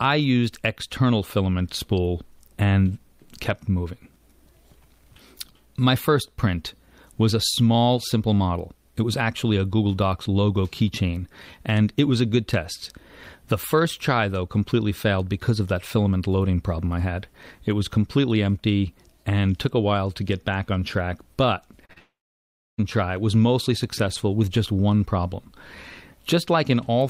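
At 21.85 and again at 21.93 s, two short concealed packet losses occur: about 40 ms of audio each time failed to reach the decoder in time, and the receiver patched roughly 35 and 32 ms of the gaps by extending the preceding sound before blending back into the real signal. To the ear these come as two quick smears in close succession, briefly wobbling the texture of the sound.

From 21.98 to 22.80 s the sound goes through what is likely a long network dropout, with about 800 ms of audio never played. The receiver first carries the last sound forward as a short, fading buzz or hiss, and then roughly 670 ms of near silence follows. The audio resumes at 22.80 s with the missing stretch simply gone, so the sound jumps ahead.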